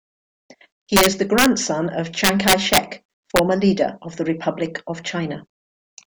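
A gain or summing stage in this speech recording exceeds the integer range and wraps to the opposite sign instead of limiting, which is integer overflow. Loud peaks flip across the full scale and produce harsh cracks, far sharper than clipping, from 0.96 to 1.46 s (pushed about 4 dB over), from 2.24 to 2.78 s (about 8 dB, the most violent), and briefly from 3.36 to 3.39 s (about 2 dB), just before "leader of the".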